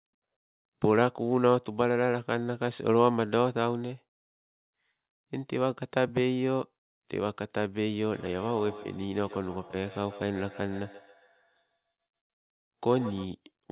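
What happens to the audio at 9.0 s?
At 9.0 s there is feedback echo between two devices (8.13–13.32 s): a second device's playback re-enters this microphone, beyond its echo canceller, returning sound about every 150 ms at up to about −18 dB. Unlike reverberation, the repeats are discrete and evenly spaced.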